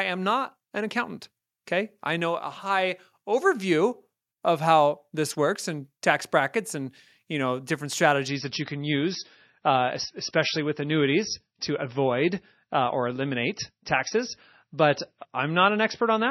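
From 8.28 s, after "and you know different", the speech abruptly loses everything above 5.9 kHz and turns swirly: an adaptive stream at a lower bitrate.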